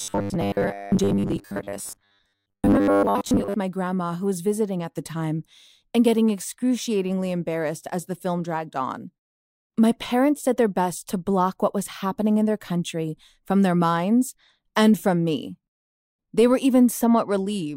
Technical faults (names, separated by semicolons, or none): robotic sound from repeated short buffers